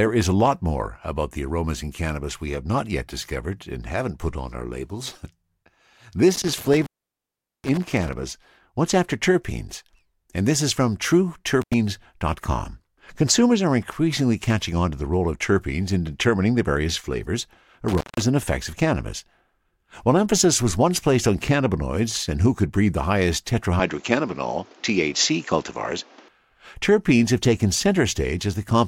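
Speech, recorded with two kinds of technical fault. Intermittent contact cuts the signal three times: from 6.35 to 8.13 s with the line open for about 0.78 s, briefly at 11.62 s for about 86 ms, and at 17.88 s for about 168 ms, between "determining the various flavors" and "and effects of cannabis". A loose cable or plug breaks the circuit for a moment, so there is crackle at each edge and faint hiss during the gap, not the clean digital silence of a packet or buffer dropout. From 23.80 to 26.28 s, between "could breed the highest" and "terpenes have taken", the sound turns duller, with nothing above 7.6 kHz and a different background noise about 30 dB below the speech. The level doesn't change and there is no gap at the switch, which likely means the input switched to a poorer device. A filter or EQ change would alter only the tone, but here the noise floor changes with it, which points to different hardware.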